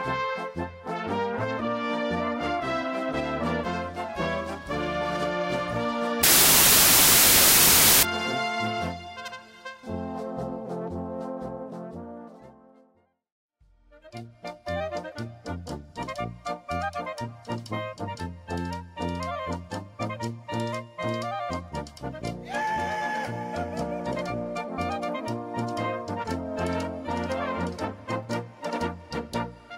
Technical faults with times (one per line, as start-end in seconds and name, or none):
6.23-8.03 samples built from the wrong bytes